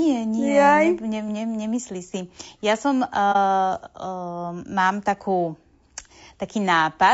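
Throughout the clip the speech sounds rough and grainy, with plainly audible codec damage, most likely from low-delay AAC compression such as AAC-ELD at a low bitrate near 32 kbps. Its short frames resolve pitch harmonics poorly, so a spectrogram shows smeared harmonics, noise filling the gaps between them, and a thin, synthetic-looking top band.

From 3.32 to 3.36 s there is AAC frame loss with muting, a gap consistent with one lost frame. The decoder zeroed the missing spectrum, and the overlapping windows fade the sound down and back up, leaving a brief, soft-edged dip. The waveform tapers into a brief near-silent dip, and the spectrogram shows a narrow blank column.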